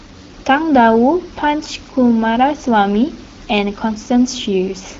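No technical faults are audible in this speech clip; the room noise sits about 24 dB below the speech, and the AMR-WB coding at 12.65 kbit/s leaves only light traces.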